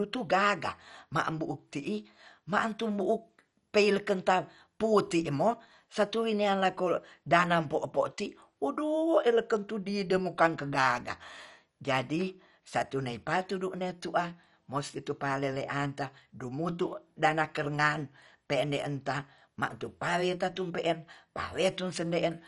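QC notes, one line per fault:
Throughout: MP2 compression, likely the cause of the dull, gurgling speech with nothing above 11.3 kHz. Upper sub-bands have been switched off entirely, and those kept flicker in and out with a coarse, granular roughness. The damage is plainly audible and fits a low rate around 48 kbps. A simple low-pass filter would sound clean, just darker; here the treble is missing and what remains churns in the bands below the cut-off.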